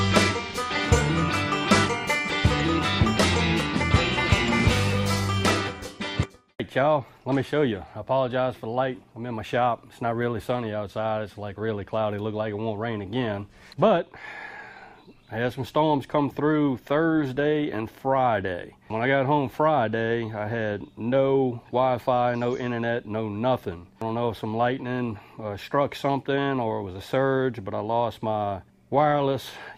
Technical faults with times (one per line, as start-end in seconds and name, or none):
6.23 skip ahead
6.34-10.12 jitter buffer speed-up